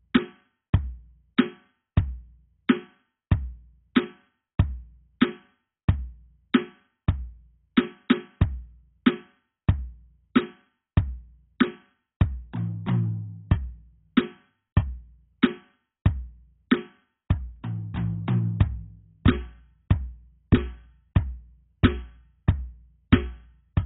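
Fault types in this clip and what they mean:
AAC compression: The whole track sounds dull and smeared, with nothing above about 3.8 kHz, so the top end is gone and sustained notes pick up a warbling, fizzy texture. That's the likely result of AAC-LC squeezed very hard. The coder drops the high bands and starves what's left of bits, leaving holes and swirly artefacts. The damage is heavy and runs from start to finish, which points to a bitrate down around 16 kbps.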